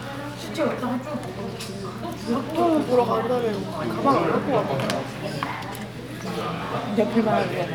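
No fault in the transfer: the sound in this recording comes through with no audible dropouts, clipping, glitches or timing errors at any point.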